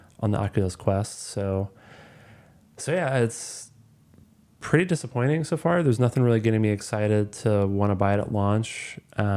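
No technical faults can be heard anywhere in this speech recording. There is nothing in it that needs a time mark or a measured value.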